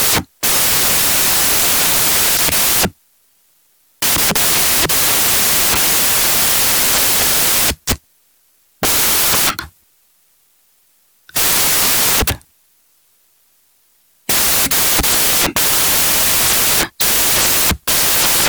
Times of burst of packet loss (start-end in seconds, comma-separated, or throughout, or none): none